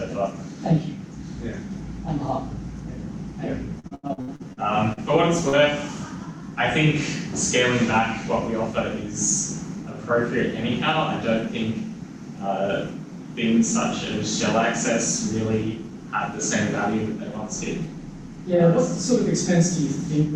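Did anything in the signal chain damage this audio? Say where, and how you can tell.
Yes. Between 3.79 and 5.0 s the network stage caused repeated packet loss (robotic sound). Nine gaps, the longest 86 ms, were patched by extending the preceding audio, so about a third of that span is synthetic. A spectrogram shows repeated frozen harmonic stripes.

Short concealed packet loss occurs at 5.49 to 5.56 s, also at the network and decoder stage. About 40 ms never arrived and was filled by continuing the last sound, then blended back in. It is heard as a brief smear and appears as a smoothed, stretched patch on the waveform.

A jitter buffer speed-up runs from 7.83 to 8.92 s. The receiver trimmed roughly 40 ms of pitch-period-sized pieces to reduce the backlog, so the sound plays at about 103% speed with unchanged pitch. The waveform shows whole periodic cycles dropped while each remaining cycle keeps its length, and pitch lines stay level.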